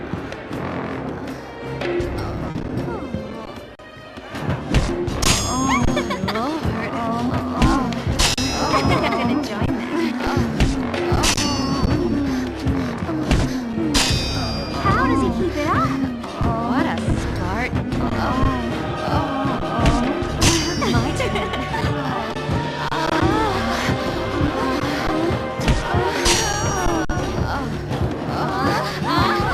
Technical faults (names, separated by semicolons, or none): short concealed packet loss